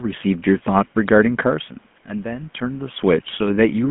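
From start to finish the speech has gone through the GSM full-rate codec. It rebuilds the voice from a vocal-tract model driven by a sparse, regularly spaced pulse train, at a rate that fits 13 kbit/s. The damage is plainly audible: the voice takes on a buzzy, gravelly roughness, squeezed into a telephone band of about 150 Hz to 3.4 kHz. The level changes near 1.5 s and 2.5 s come from the talker moving, with room noise underneath.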